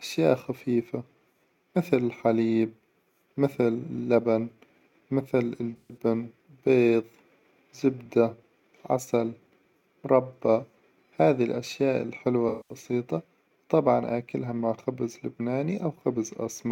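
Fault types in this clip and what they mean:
AAC frame loss with concealment: the decoder lost AAC frames and rebuilt them from the last good spectrum, leaving smeared, phasey patches around 5.77–5.97 s and 12.48–12.75 s.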